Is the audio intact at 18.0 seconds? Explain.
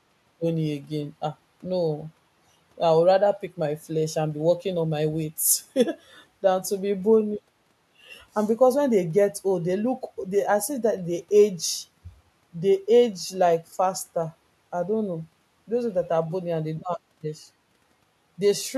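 Yes, the audio is intact at 18.0 seconds, with no dropout, click, distortion or other fault to be heard at that moment.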